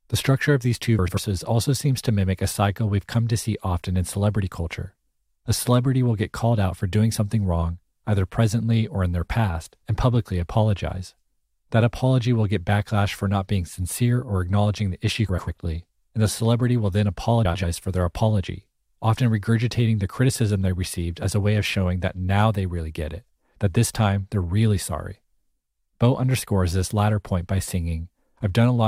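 Frames out of order at 0.99–1.19 s, 15.28–15.48 s and 17.45–17.64 s in this speech: two adjacent blocks of about 93 ms each play swapped, which fits runs of four frames decoded in the wrong order. The result is a brief garbled flutter, and no time is lost.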